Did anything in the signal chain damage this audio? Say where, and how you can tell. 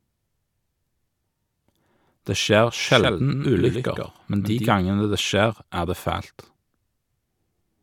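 Yes. A doubled audio track, likely from a second, slower capture path, runs from 2.87 to 4.73 s, starting just before "gangene det skjer er". A dry, full-band copy trails about a tenth of a second behind, a few dB quieter, and cuts in and out abruptly.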